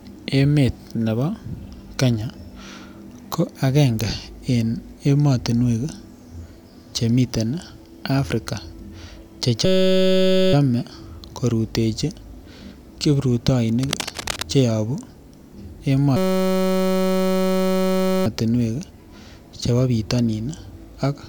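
System hang loops at 9.65–10.53 s and 16.17–18.26 s interrupt this speech recording, each turning into a steady 188 Hz buzz as a 5.33 ms slice repeats exactly, which fits a 256-sample buffer cycling while the system froze. Cable scratch noise at 13.81–14.42 s adds dense, uneven rustling about 5 dB below the speech, likely from a worn cable or connector being moved.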